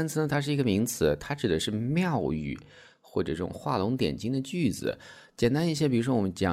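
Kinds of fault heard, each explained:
No technical fault can be heard anywhere in the speech signal; it stays continuous throughout.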